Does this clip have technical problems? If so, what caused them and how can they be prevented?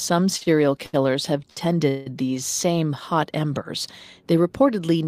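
Yes. Four short stalls from late packets are audible at 0.37–0.43 s, 0.43–0.48 s, 0.86–0.95 s and 1.50–1.59 s, where the speech hangs on one sound for about 36, 31, 71 and 66 ms. Each time, the jitter buffer ran dry waiting for a packet, so the receiver prolonged the last sound, then resumed at the same point with nothing skipped. On a spectrogram, the harmonics run flat and unchanging across each stretch. In the waveform, one cycle shape repeats. A larger or adaptive jitter buffer would absorb this delay variation.

A call audio freeze follows at 1.89–2.08 s. For about 177 ms the speech turns into a fading buzz that never reaches silence before continuing where it stopped. The likely cause is a longer hold-up of packets in transit, which emptied the buffer again. On the spectrogram, this shows as horizontal bands that blur and weaken. In the waveform, the envelope decays smoothly instead of following the syllables. 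Prioritising the call traffic on the network (QoS) would reduce these transit delays.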